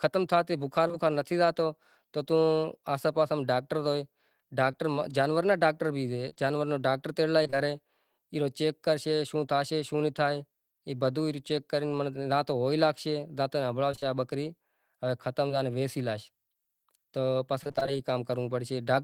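Two packets in a row arrived too late for the decoder at 0.87 s and again at 0.92 s, each taking about 20 ms of audio with it. This is short concealed packet loss: the receiver bridged each hole by extending the preceding sound for roughly 20 ms and then cross-fading back into real audio. Because the two patches sit back to back, the listener hears one small smear or wobble just before the one-second mark, and a brief consonant there could be swallowed.

From 4.71 to 7.58 s the stream suffers scattered short gaps. About seven packets go missing one at a time across nearly three seconds, the longest hole near 20 ms, for 120 ms of lost audio. Each was patched by continuing the last sound, so only around 4 percent of the span is synthetic. The speech remains clear, broken only by isolated ticks and tiny hiccups, with the timing nudged by about 15 ms as the receiver catches up.

The same pattern of scattered short gaps returns between 13.92 and 15.51 s, this time with roughly four lost packets totalling 80 ms and the longest hole near 30 ms. 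Concealment covers about 5 percent of the span, so the effect is again a handful of brief smears rather than lasting damage.

Between 17.63 and 17.98 s the losses cluster into repeated packet loss. Seven gaps fall within a third of a second, 140 ms missing and the longest 25 ms, so concealment fills about 45 percent of that stretch. The decoder never settles before the next hole arrives, and the speech turns choppy, with pieces clearly absent.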